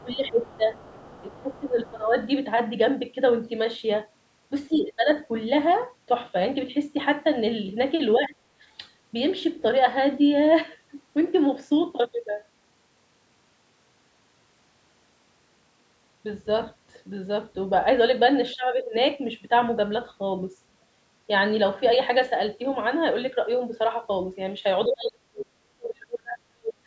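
Speech in which the voice dips, thins or breaks up at 0.03–0.77 s, 1.22–2.16 s, 4.69–5.1 s, 8.18–8.38 s and 18.56–18.94 s, and sinks by about 40 dB from 24.87 s to the end. This is speech suppressed in double talk, likely from an echo canceller turning the signal down while both sides spoke. A faint second voice, roughly 25 to 30 dB below the talker, comes through at 0.46–0.57 s and 0.78–1.59 s. This is the other side's voice leaking through, likely loudspeaker echo that the canceller failed to remove from the microphone.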